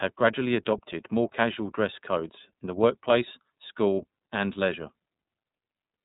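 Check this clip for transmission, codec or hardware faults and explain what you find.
iLBC codec coding runs through the whole speech clip. Each 30 ms frame's excitation is coded independently, which fits the 13.33 kbps mode, leaving plainly audible rough, synthetic texture, and nothing passes above 3.8 kHz, so the sound is dull and narrowband.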